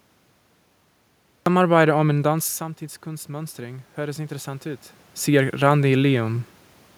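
The first 1.46 s are digital silence, then speech starts abruptly mid-sound: a cut-off start, where capture began late and the natural onset was lost. From 2.1 s to 6.48 s, automatic gain rising: after the level drops by about 11 dB, the gain control slowly adds about 6 dB, so speech and room noise swell together.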